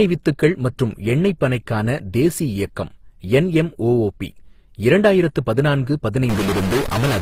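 Throughout the speech, the signal was likely passed through more than one lossy codec, with a chain that fits low-bitrate HE-AAC followed by Opus. Each stage's artefacts stack on the last, so the sound carries mixed smearing and swirl, with nothing above 15.8 kHz.

From 6.29 s to the end at 7.22 s, just after "இயக்கம் என்எம்ஒஒபி இரண்டாயிரத்து பதினான்கு", a stuck bit, likely from a faulty data line or converter, holds one bit fixed. Roughly half the sample values are thrown off, giving distortion and noise filling the quieter moments.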